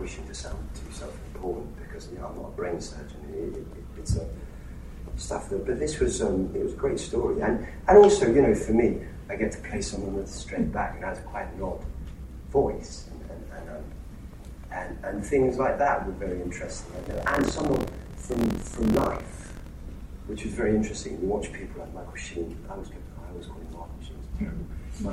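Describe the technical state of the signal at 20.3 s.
At 20.3 s the signal is intact, with no dropout, distortion, glitch or other technical fault audible at that moment.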